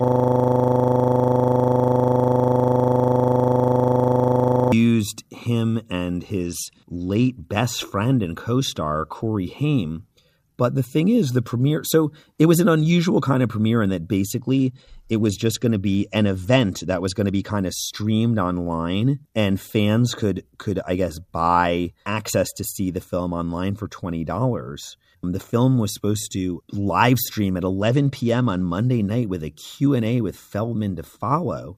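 From the first instant until 4.72 s, the audio is caught in a system hang loop that is already running when the clip begins. The machine or its driver stalled while the sound hardware kept replaying one 40 ms slice of its ring buffer, repeating it over a hundred times. Because the slice is so short, the result is a steady 25 Hz buzz rather than a stutter, and no new speech gets through until it breaks.

Three Bluetooth SBC bit pool drops follow. The first runs from 6.46 to 7.49 s, between "him and" and "best friend and co". The second runs from 14.24 to 17.59 s, between "of premiere in that" and "of streamed online and". The third runs from 27.81 to 28.78 s, between "to live stream at" and "night with a". In each, the speech loses its top end and takes on a gritty, coarse noise, then clears. The sound fits a congested link forcing the bit pool from 31 down to 13, roughly 94 kbps. At that setting the upper sub-bands are starved and the remaining bands are quantised coarsely.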